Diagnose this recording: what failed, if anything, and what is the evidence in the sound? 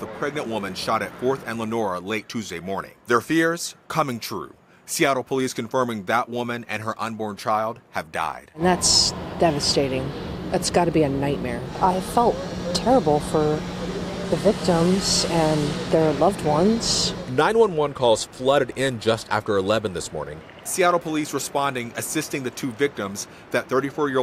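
Nothing failed here as far as I can hear: no stage in the chain, from the wiring through to playback, has left any mark on the sound, so there's no evidence to point to.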